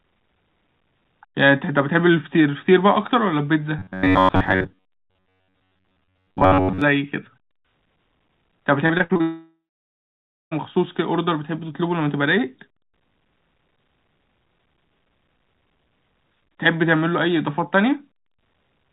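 From 3.79 to 6.82 s the sound turns into a rigid, metallic buzz with a fixed pitch near 94 Hz that roughly follows the speech contour. This is robotic sound from repeated short buffers, likely caused by new audio arriving too seldom so that the playback side kept re-emitting its last short block. The buzz frequency fits a block of about 10.7 ms. Most of the real audio in this stretch is skipped rather than played.

Between 8.86 and 9.21 s there is repeated packet loss with robotic sound. Five short holes open in quick succession, the longest about 59 ms, and about 160 ms of audio goes missing in total. Each hole is patched by extending the preceding sound, so roughly 43% of the span is concealed material. The result is choppy and metallic, with pieces audibly dropped.

The loss runs straight into a long network dropout from 9.21 to 10.53 s, in which about 1.3 s of audio never arrives. The receiver first stretches the last sound into a fading buzz. 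Then, for roughly 0.93 s, only silence remains, which fits a complete interruption of the incoming stream. The audio resumes after 10.53 s without the lost section. Throughout the clip the band stops at 4 kHz, which points to a narrowband G.711 A-law call path.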